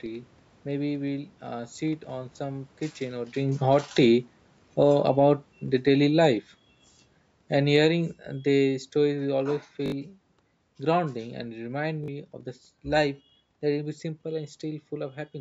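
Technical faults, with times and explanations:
3.39–13.96 s, automatic gain falling: the gain control judged the input too loud or its background too strong and eased its gain down by about 13 dB over ten seconds, so the speech and its room background sink together, unlike the talker's own shift near 3.5 s.
9.86 s and 12.04 s, repeated buffer: fresh audio arrived late, so the device replayed its last short piece, three extra times, then twice, with hard joins. The stutter's repeat length fits a 20 ms buffer, and roughly 70 ms and 40 ms of speech go missing.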